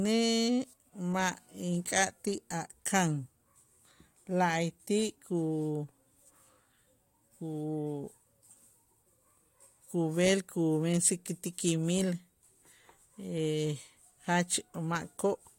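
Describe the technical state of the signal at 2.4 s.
At 2.4 s the speech signal is intact, with no audible technical fault at that moment.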